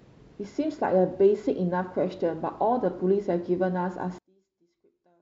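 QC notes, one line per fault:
4.19–5.22 s, one channel inverted: the speech drops about 37 dB in mono, leaving a faint trace, likely because one side's polarity flipped and cancels the centre.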